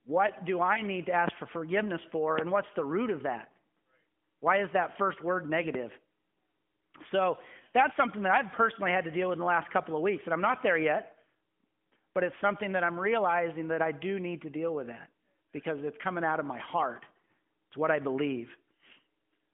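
At 0.74 to 0.82 s the speech briefly dips and warbles for a single 20 ms frame. These are lost AMR speech frames: a frame failed its checksum, so the decoder reused the previous pitch and vocal tract settings at lower gain to fill the gap. The same short warble returns at 10.52 to 10.56 s, after "of weeks and I'm" and before "there yet", and at 17.26 s, after "out of my heart". Each time the speech picks up again almost at once, within the 150 Hz to 3.4 kHz band of the narrowband codec.

A sharp loud pop cuts in at 1.28 s, roughly 20 dB above the speech, and the talking carries on underneath it. A second, equally strong pop lands at 2.39 s, right after "for forgiveness for", and a slightly softer one, about 15 dB above the speech, comes at 5.75 s. Each is a single brief transient, likely caused by a voltage spike from a plug, a switch or static entering the signal chain.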